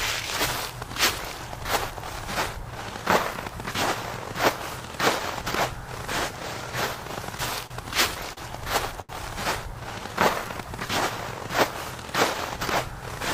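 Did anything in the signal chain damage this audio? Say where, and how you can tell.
Yes, the damage comes from the network stage, specifically how the receiver's jitter buffer coped with late-arriving packets.

Between 7.37 and 8.39 s there are repeated stalls (stutter): four separate gaps where the receiver ran dry and extended the last sound, about 95 ms of fill in total, the longest 37 ms. Nothing is actually lost, so the audio drags and hiccups rather than skipping. That is what separates this from packet loss, where content would vanish and the timeline would jump.

At 9.01 to 9.11 s there is a short stall from a late packet. A single packet missed its deadline, the buffer emptied, and the receiver held the preceding sound for 76 ms before resuming from the same point, shifting playback delay by 76 ms. You hear one stretched sound with a slight buzz or dip. Unlike the stutter, it is an isolated event rather than a cluster of repeated gaps.

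From 9.99 to 10.87 s there is a jitter buffer slow-down. The receiver rebuilt its reserve by repeating small pitch periods and pause fragments, adding 46 ms and running at 96% speed. The pitch stays the same while the timing stretches, which distinguishes this from a clock or sample-rate mismatch, where pitch would drop along with speed. The effect is drawn-out sound, not a hold or gap.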